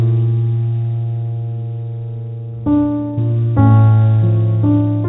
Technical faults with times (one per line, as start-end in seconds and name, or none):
none